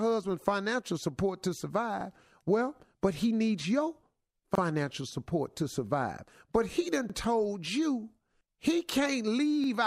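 Overlapping chunks cause a short stutter at 2.01–2.05, 4.55–4.60, 7.10–7.14 and 9.64–9.68 s, the first just after "husband's financial support to". The speech was handled in 2.5 s chunks, and each one started early. So 44 ms plays twice at every join, heard as a regular click.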